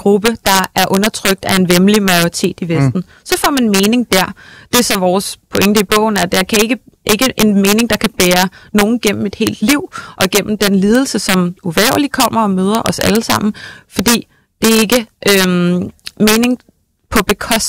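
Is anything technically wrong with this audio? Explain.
Yes. Throughout the speech, integer overflow puts violent, sharp cracks on the loudest peaks, far harsher than clipping. The signal is driven about 4 dB past the integer limit, so a small fraction of samples, well under one percent, wrap to the opposite extreme instead of being limited.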